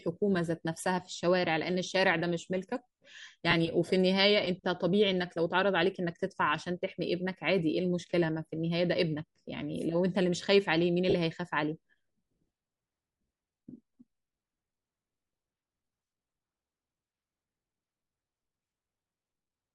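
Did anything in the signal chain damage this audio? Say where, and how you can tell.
Yes. Bluetooth LC3 compression runs through the whole clip, at the codec stage. The speech carries a breathy, grainy edge across the upper band, and that damage is plainly audible. The likely cause is LC3 coding in 10 ms frames at a rate that fits about 48 kbps. The encoder zeroes parts of the high spectrum it cannot afford and the decoder fills those gaps with noise.

Lost LE Audio frames appear at the Bluetooth link, at 3.51 to 3.54 s and again at 11.10 to 11.14 s. Each shows as a brief noisy smear lasting about 20 ms and 30 ms, which fits two and three 10 ms frames dropped in transport. The LC3 decoder concealed the gaps by repeating the last spectrum with randomised signs, so tonal detail dissolves into hiss there instead of cutting to silence.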